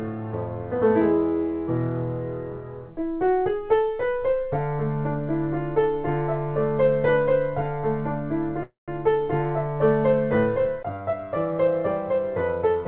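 At 8.63 to 8.91 s a call audio freeze, likely from delayed packets emptying the jitter buffer, fills about 250 ms with a buzz or hiss that fades into 160 ms of silence, a flat gap in the waveform. At 12.75 to 12.85 s a jitter buffer speed-up cuts about 70 ms, playing at 153% speed. The spectrogram shows compressed texture at unchanged pitch, below the band's 4 kHz ceiling.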